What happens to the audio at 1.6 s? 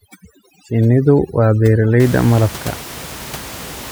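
At 1.6 s the speech is still inside a stretch of overdone noise removal running from 0.0 to 2.0 s. The reducer gates individual frequency bands near its noise estimate, stripping the room noise (about 17 dB below speech) to twinkling near-silence and taking quiet parts of the voice with it.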